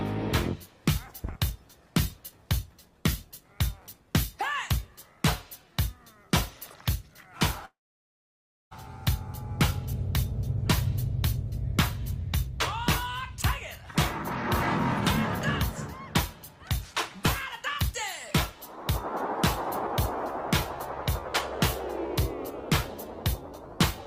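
From 7.65 to 8.73 s a long network dropout, likely a stalled stream, leaves a brief fading buzz, then about 0.97 s of silence: a blank spectrogram gap and flat waveform.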